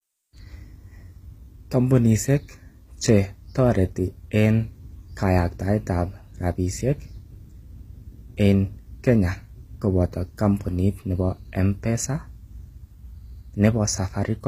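A speech clip with plainly audible codec damage from start to finish. The treble sounds synthetic: s sounds come out gritty and lispy, with a metallic edge where the upper harmonics fail to line up with the lower ones. Nothing is present above 15.4 kHz. The likely cause is HE-AAC compression, whose spectral band replication rebuilds the top octaves by copying lower bands upward, and the damage fits HE-AAC v2 at a low bitrate around 24 kbps.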